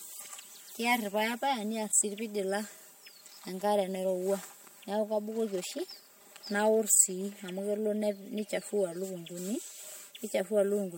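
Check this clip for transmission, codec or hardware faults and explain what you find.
Two faults run through the whole speech recording: comb filtering from a channel delay, and the stacked artefacts of a lossy transcode.

Channel delay (comb filtering), throughout. One channel arrives roughly 5 ms behind the other, and when the pair is folded to mono, content common to both cancels at regularly spaced frequencies. The first notch sits near 100 Hz, with further notches about every 200 Hz above it. The speech sounds hollow and phasey, marked by fixed gaps that never move.

Transcoding between lossy codecs, throughout. Nothing is present above 16.6 kHz, and two distinct kinds of coding damage overlap and are heard together. That combination is most likely a chain of HE-AAC at around 48 kbit/s followed by MP3 at around 64 kbit/s. The second encoder wastes bits re-coding the first one's artefacts and adds its own, so both layers remain audible.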